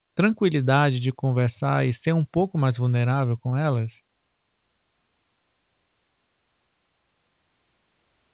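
At 3.50 to 3.54 s, just after "ser pouco mais vulnerável", a short concealed packet loss occurs: about 20 ms of the call's speech arrived too late, and the receiver filled the gap by extending the preceding sound before blending back, leaving a brief smear. The G.711 call path caps everything at 4 kHz.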